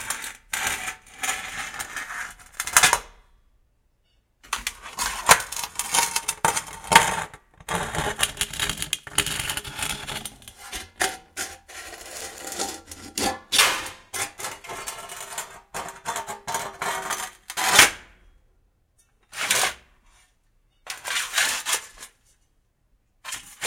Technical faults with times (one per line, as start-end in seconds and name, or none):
2.65-2.89 loose connector crackle
12.16-12.46 loose connector crackle